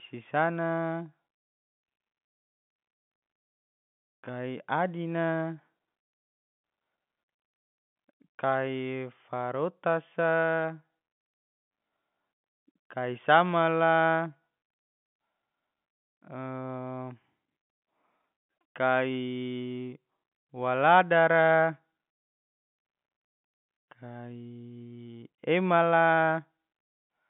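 No technical faults can be heard anywhere in the speech.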